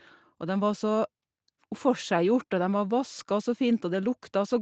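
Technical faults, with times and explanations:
Nothing stood out on listening to this speech, which carries the band-limited sound of a call path with no content above about 8 kHz.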